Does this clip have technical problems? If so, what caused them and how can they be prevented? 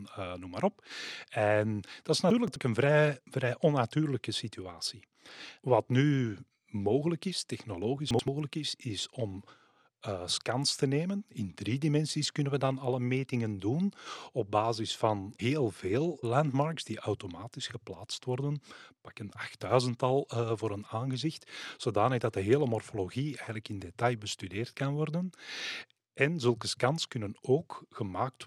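Yes. Two chunks out of order: 2.30–2.56 s, after "dat is", and 8.11–8.28 s, before "is is om eh". About 85 ms blocks play two and one places late, giving jumbled sound. Unlike dropouts, no audio is missing. Proper sequence-numbered buffering prevents it.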